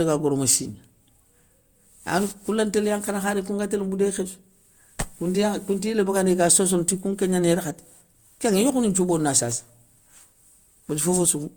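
Repeated lossy re-encoding, likely about five Opus passes at what sounds like 64 kbit/s, causes generation loss throughout: swirly, hollow, smeared speech with blurred attacks.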